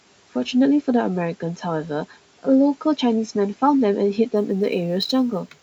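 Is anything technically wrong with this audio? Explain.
Yes. From 4.36 s to 5.62 s the speech picks up a fine hiss and roughness on louder, brighter sounds. This is sample clock jitter: an unsteady converter clock of a few microseconds puts errors roughly 35 dB below the speech.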